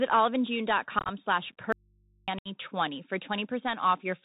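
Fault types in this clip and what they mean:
Bluetooth CVSD headset codec: The speech sounds narrow and scratchy, with nothing above 4 kHz, rough sibilants and a granular hiss underneath. This fits a 64 kbps CVSD link, where one bit per sample nudges the waveform up or down with an adapting step size.
Unconcealed Bluetooth headset packet loss: The speech turns chopped and crackly from 0.99 to 1.10 s, with about 64 ms missing in bursts of up to 19 ms. It breaks again from 2.39 to 2.48 s, losing about 68 ms. The holes were left empty, pointing to around fifteen and twenty lost packets.
Audio dropout to a faint residue: From 1.72 to 2.28 s the speech cuts out abruptly for about 554 ms, leaving only mains hum about 35 dB below the speech level. The likely cause is the signal being lost while the input after the break stayed open and live.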